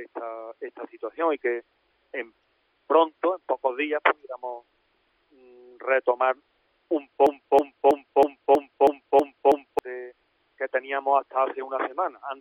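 At 7.27 s the audio falls into a broken-record loop: a fragment of about 0.32 s plays, then plays again identically, back to back, eight times, until normal sound resumes at 9.79 s. The repetition is exact and mechanical, with an even stutter at roughly three repeats per second. The likely cause is a stall in the player, encoder or stream that kept resending the last buffered piece, so the audio belonging to those 2.5 seconds is missing.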